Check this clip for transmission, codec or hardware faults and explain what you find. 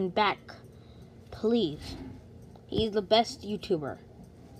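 Nothing in this sound points to a transmission, codec or hardware problem; there's no trouble to report here.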